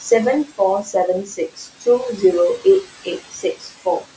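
Right from the start you can hear noise suppressor artifacts. The suppressor pulls the steady background down by about 16 dB, frame by frame, so the room noise (which sits about 16 dB under the speech) ducks away in the gaps and swells back up whenever someone talks. The call's band limit tops out around 8 kHz.

Then there are two spots of speech cut by the noise suppressor. Between 1.25 and 1.87 s it mistakes parts of the speech for background and turns them down by as much as about 18 dB, for roughly a third of a second in total. It happens again from 3.04 to 4.04 s, with dips of up to about 15 dB over a bit under half a second. In both places the affected speech sounds swallowed or oddly faint.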